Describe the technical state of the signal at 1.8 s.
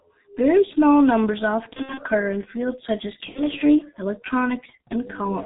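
At 1.8 s the signal is inside a burst of VoIP packet loss concealed by the speech codec, running from 1.73 to 2.01 s, between "small numbers" and "in fields such as". About 120 ms of audio is missing, scattered over 240 ms, with gaps up to 60 ms, which fits four lost 30 ms frames. The decoder extends its last pitch and filter at falling gain, so the sound turns into a buzzy tone or coloured noise that fades. A spectrogram shows smeared, repeated harmonic bands. The waveform shows decaying, overly regular periods.

Underneath, the whole clip carries heavy G.723.1 codec damage, a coarse model updated only once per 30 ms frame, at a rate that points to about 6.3 kbit/s. The speech sounds muffled and hoarse, with blurred consonants. A spectrogram shows an empty region above 4 kHz and blocky, frame-stepped formant tracks.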